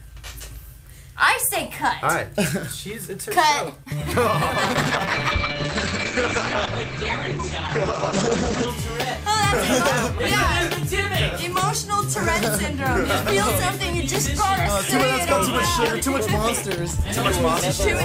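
At 4.64 s there's a call bitrate drop. The encoder gets starved of bits, so the sound is coded far more coarsely and loses its top end above about 8 kHz, which fits a fall from roughly 64 to 9 kbps. It clears at 8.73 s.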